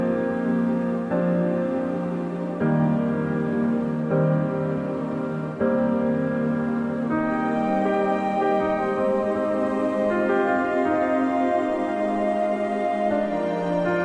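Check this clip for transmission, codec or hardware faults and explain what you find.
Nothing in this one points to a transmission, codec or hardware problem, so there's nothing to flag here.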